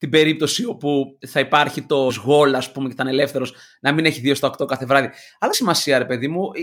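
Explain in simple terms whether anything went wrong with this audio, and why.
Two brief glitches interrupt the speech, from 2.09 to 2.11 s after "όπου θα υπάρχει το" and at 5.53 s after "κάθε βράδυ". Both come from damaged data in a compressed stream: the decoder hit corrupted bytes, lost its place, and jumped ahead to the next readable frame.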